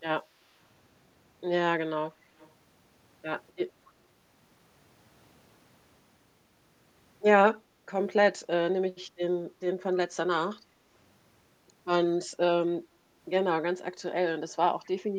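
At 2.38 to 2.52 s and again at 3.87 to 3.92 s, a faint, delayed copy of the speech surfaces as a short scrap, trailing the original by 257 ms. It sits well down, about 30 dB below the speech the first time and nearer 35 dB the second. This is likely an echo leak: the far end's loudspeaker output reached its microphone, the echo canceller left a residue, and that residue was sent back.

From 7.6 to 7.86 s the background is gated by the echo canceller. The room sound dips by about 7 dB at its deepest, with the whole disturbance lasting around a third of a second. While loudspeaker playback was active, the canceller pulled the microphone level down hard, so the ambience momentarily thins out and then recovers once the suppression releases.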